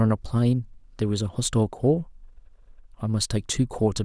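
Nothing here stands out as a fault; the speech just runs along without any glitch worth flagging.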